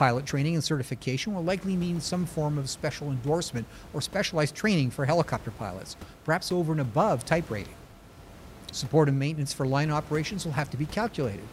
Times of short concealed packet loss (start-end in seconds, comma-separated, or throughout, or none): none